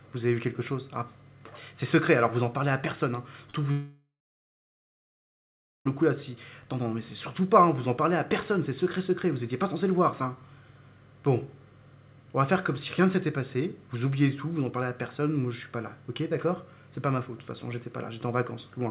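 The audio arrives over a call path with nothing above 4 kHz, which fits G.711 A-law at 64 kbps. From 3.50 to 3.55 s there is short concealed packet loss. About 40 ms never arrived in time. The receiver extended the last sound to cover the gap, so it smears briefly before rejoining. From 3.71 to 5.87 s the sound is stretched into a fading buzz or hiss, then falls to silence for about 1.8 s. It resumes at 5.87 s with a portion missing. The likely cause is a long network dropout of about 2.1 s.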